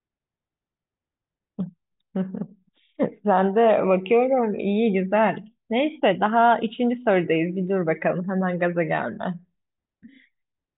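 No technical faults are audible.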